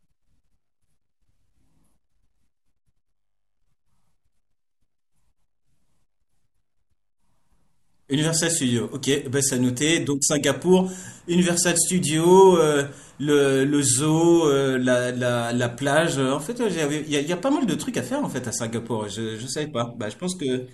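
No technical faults are audible anywhere in this recording.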